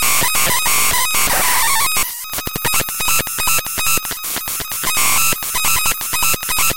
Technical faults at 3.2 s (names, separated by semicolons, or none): periodic USB or driver dropouts